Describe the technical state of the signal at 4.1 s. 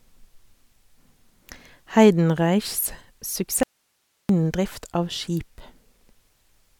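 At 4.1 s the speech is in an audio dropout to a faint residue, 3.63 to 4.29 s: the signal is abruptly replaced by hiss roughly 50 dB down, likely an upstream loss while the path stayed live.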